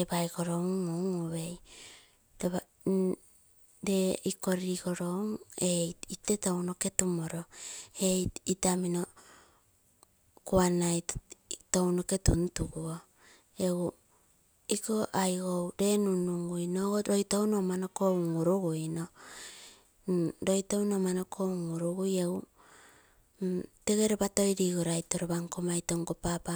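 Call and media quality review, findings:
No faults found on this recording.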